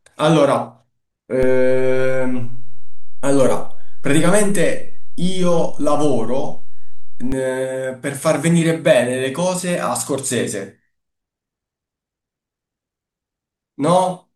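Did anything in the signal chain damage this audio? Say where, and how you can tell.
Yes, there's a DC step at the converter: the zero line jumps by about -14 dBFS at 1.43 s and drops back at 7.32 s, each shift giving a low thump under the speech.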